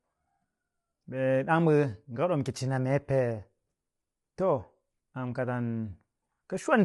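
From start to end, the speech likely went through low-delay AAC compression, whose short frames capture pitch harmonics poorly, at a rate that fits about 32 kbps. The speech sounds plainly rough and grainy, with noise between harmonics and nothing above 11.6 kHz.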